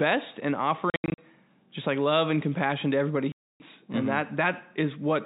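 Speech, heard through a telephone-band G.711 channel, is twice chopped by dead-silent holes with hard edges. From 0.9 to 1.18 s, just before "just like love and", about 200 ms goes missing in scattered gaps, the longest 80 ms. From 3.32 to 3.6 s, right after "and compassion to everybody", a solid 280 ms drops out. This is packet loss filled with silence, and the gap lengths fit lost packets of 20 ms each.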